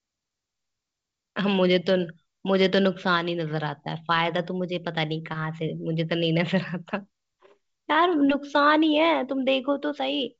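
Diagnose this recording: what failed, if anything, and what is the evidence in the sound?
Nothing has gone wrong in this speech recording: it comes through the G.722 wideband telephone path with the usual bandwidth up to about 7 kHz, and any coding trace is faint at most, which fits the full 64 kbit/s mode.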